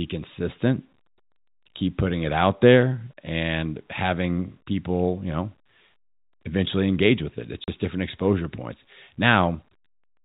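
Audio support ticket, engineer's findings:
Packet loss filled with silence, 7.64–7.68 s: receiver dropped about 40 ms, consistent with two 20 ms packets, and played silence. Hard-edged gap just before "different exposure points". G.711 telephone band intact around it.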